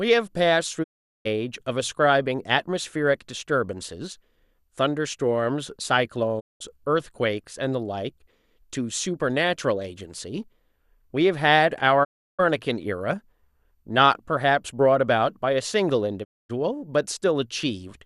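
Digital broadcast dropouts at 0.82–1.27 s, 6.39–6.62 s, 12.03–12.41 s and 16.23–16.51 s. Each time, the receiver stopped getting valid frames and muted. The speech fades out over about 20 ms into silence lasting 408, 192, 336 and 240 ms, then resumes with that stretch missing.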